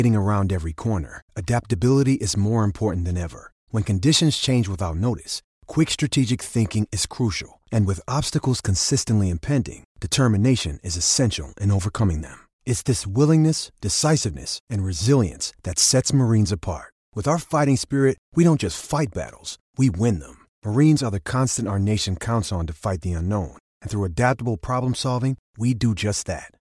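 Nothing to flag in this speech recording; there's no technical fault to point to anywhere in it.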